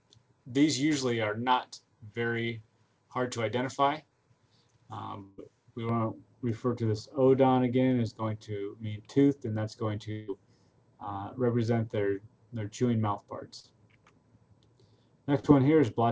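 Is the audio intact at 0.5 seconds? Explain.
Yes, the audio is intact at 0.5 seconds. It passes through the WebRTC call path as expected, with nothing above 8 kHz, which fits a wideband call codec such as G.722.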